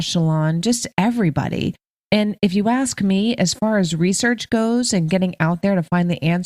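Listening to the speech recording, nothing technically wrong stood out at any point.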